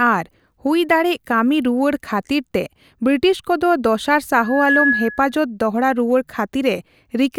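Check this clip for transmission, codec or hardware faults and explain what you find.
One hardware fault is present: a loudspeaker feedback squeal from 4.40 to 5.38 s, ending just before "ᱫᱚᱦᱲᱟ ᱨᱩᱣᱟᱹᱲ". A microphone was picking up the loudspeaker it fed, and near 1.7 kHz the loop gain exceeded one, so that frequency fed on itself. It swells over roughly a third of a second into a piercing tone about 5 dB above the speech. Unlike a steady interfering tone or hum, it grows out of nothing before settling.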